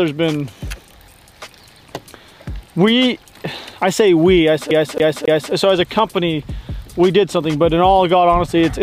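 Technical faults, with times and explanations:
4.71 to 5.53 s, CD stuck on one turn: a scratch kicks the laser back one track on each revolution, so the same 0.27 s slice of sound plays three times, each jump marked by a brief mute, giving the quick, even stutter of a skipping disc.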